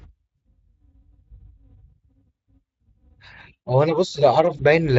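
At 0.39 to 0.41 s, and again at 4.57 to 4.62 s, the speech shows VoIP packet loss concealed by the speech codec. The decoder bridges the missing audio, about 40 ms the first time and 20 ms the second, which fits two lost frames and then one, by repeating its last pitch and filter at falling gain. Unlike a plain dropout, there is no silence or click. The speech smears briefly into a buzzy tone or coloured noise that fades and stays weak for a moment after, while the light Speex coding around it stays steady.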